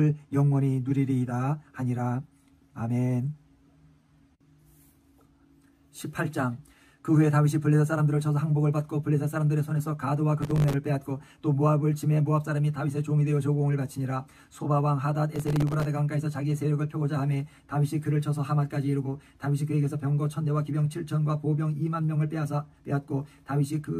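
Processor overload crackle at 10.42–10.74 s and 15.36–15.85 s: dozens of missed processing deadlines leave tiny silent gaps, which fits very short buffers of around 1.5 ms and produces gritty, tearing crackle.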